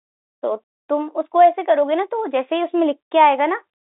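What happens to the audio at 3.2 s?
Nothing goes wrong at 3.2 s: the speech carries on intact through the narrow telephone band of its G.711 coding, with no dropout, click or distortion at that point.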